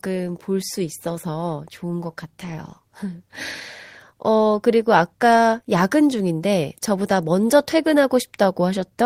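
A speech recording with no technical faults to report. Nothing in the sound calls for a time, a cause or a measured value.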